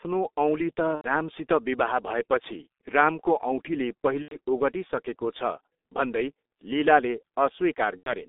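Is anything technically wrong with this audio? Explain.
Yes. Throughout, the G.723.1 codec squeezes the speech into a band of 250 Hz to 3.6 kHz at a rate that fits about 6 kbit/s, leaving it muffled and hoarse, with smeared consonants.

There is also VoIP packet loss concealed by the speech codec at 0.95 to 1.05 s (just before "रामसित विवाह भएपछि रामको"), 4.22 to 4.36 s (right after "विवाह भएपछि रामको औँठीले"), 6.47 to 6.50 s, and 7.97 to 8.14 s. Each gap matches roughly 90 ms of lost frames, or 30 ms at 6.47 s. The decoder stretches its last sound into a fading buzzy tone or coloured noise, and the voice stays weak afterwards.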